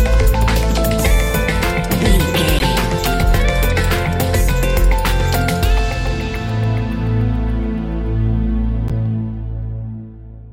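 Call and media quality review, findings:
Corrupt frame decoded: short chirpy bursts at 2.58–2.63 s and 8.88–8.91 s, roughly one frame and then a couple. Decoder's playing damaged frames, so misread gains and codes throw energy at wrong frequencies. First one's louder, error peaking around -5 dBFS.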